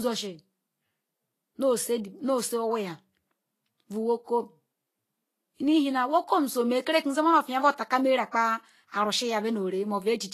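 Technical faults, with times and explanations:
Throughout, Vorbis compression: grainy, hissy treble with nothing above 14.2 kHz. Likely low-quality Vorbis coding, consistent with a bitrate near 32 kbps, coarsely quantising high-frequency detail.
8.31 to 8.34 s, pre-echo: a 32 ms smear of hiss precedes a sharp attack, as quantisation noise spread across the transform block fills the quiet moment before it.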